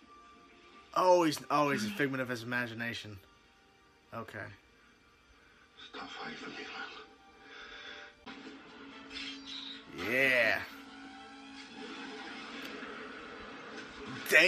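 Nothing in this audio registers as a technical fault at any point.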